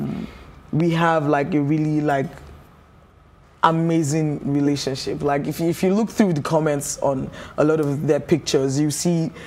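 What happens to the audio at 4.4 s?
Nothing goes wrong at 4.4 s: the audio plays through that moment intact, with no dropout, click, distortion or other audible fault.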